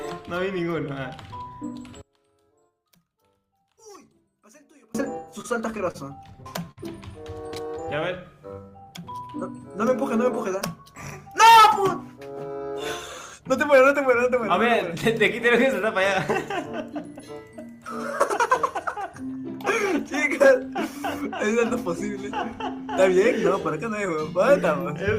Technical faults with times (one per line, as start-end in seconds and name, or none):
2.01-4.95 one channel inverted
5.41-6.79 repeated stalls (stutter)